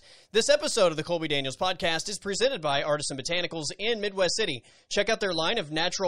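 A speech clip with an adaptive stream at a lower bitrate. Right after "podcast is", at 2.35 s, the quality drops abruptly and stays low to the end at 6.08 s. There is no gap at the switch. From that point nothing is heard above 11.4 kHz. The treble turns dull, and codec artefacts rise. This fits a slowed connection forcing the player onto a lower-quality version, consistent with MP3 falling from 128 to 32 kbit/s.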